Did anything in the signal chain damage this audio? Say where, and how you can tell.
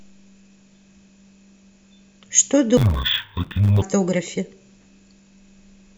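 Yes. From 2.77 to 3.82 s the speech goes dull and robotic, buzzing near 94 Hz. That's interleaved audio read as planar at the sample-format stage, which fits 512-sample buffers.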